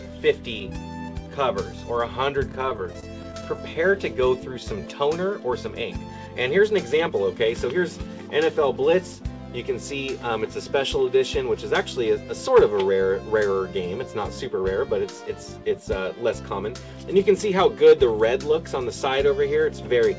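Repeated stalls (stutter) run from 2.52 to 3.76 s. Packets arrived late again and again, so the jitter buffer kept running dry and the receiver stretched the last sound across 12 short gaps, none longer than 27 ms, about 143 ms in all. On a waveform this looks like small repeated or smeared stretches, and on a spectrogram like brief frozen bands. A jitter buffer slow-down follows from 4.53 to 4.82 s, playing at 84% speed and adding 55 ms. The receiver repeated pitch periods to rebuild its reserve, so the sound drags at unchanged pitch, and a spectrogram shows the same patterns drawn out horizontally. A jitter buffer speed-up from 18.26 to 19.20 s runs at 105% and removes roughly 50 ms. Short pitch-period slices were cut to shed excess delay, giving a hurried feel and slightly compressed spectrogram features. All of this comes through a call path whose content stops at 8 kHz, which fits a wideband codec such as G.722.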